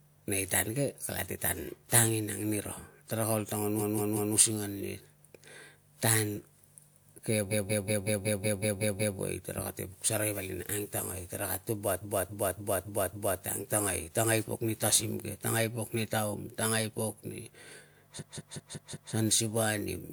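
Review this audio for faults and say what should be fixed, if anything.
The speech stutters four times, a short chunk replaying back to back. This is repeated frames: compressed frames played again, 185.8 ms blocks (278.6 ms at 12.01 s, which fits six frames rather than four). The stutters run from 3.79 to 4.34 s (three extra plays), 7.50 to 9.17 s (nine), 12.01 to 13.40 s (five) and 18.18 to 19.11 s (five), adding about 4.6 s of duplicated audio in total. To prevent it, make sure the encoder, muxer or transport never writes or resends a frame that has already been delivered, for example by tracking frame sequence numbers and dropping duplicates.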